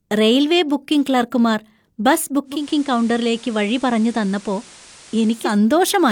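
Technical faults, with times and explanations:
2.45–5.59 s, digital radio blending to analogue: a 273 ms cross-fade to FM brings hiss and about 2 dB lower level; the spectrogram shows a noise floor.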